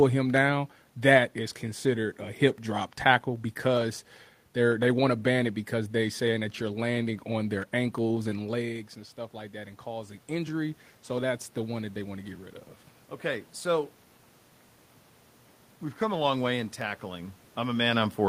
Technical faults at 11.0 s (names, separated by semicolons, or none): automatic gain rising